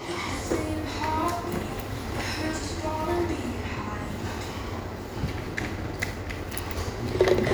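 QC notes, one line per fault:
No faults found in this clip.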